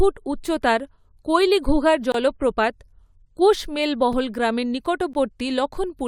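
Speech broken by three brief, hard-edged silent holes: about 24 ms at 2.12–2.14 s, right after "উচ্চতার কৈলিঘুগার", a tiny 4 ms dropout at 4.13 s, and about 16 ms at 5.13 s. It's a gap between stream segments. Timestamps on consecutive 1.0 s segments don't quite meet, so the player pads the shortfall with silence and nothing is lost.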